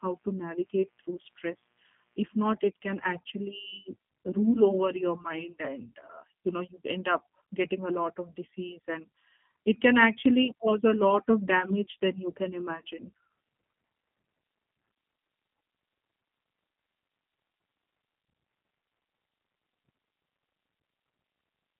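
From the start to 2.45 s, a mains buzz sits under the speech. It ends just before "it can actually rule". Sharp switching spikes, twice per 60 Hz cycle, leaked into the signal. Their harmonics give a faint, raspy buzz, roughly 40 dB below the speech.

The G.729 codec colours the whole clip. The line band runs from 150 Hz to 3.4 kHz, and nothing passes above 3.6 kHz. Speech is rebuilt from a filter, pitch prediction and sparse pulses, which fits an 8 kbit/s coder. The damage is plainly audible: the speech sounds muffled, rough and slightly synthetic.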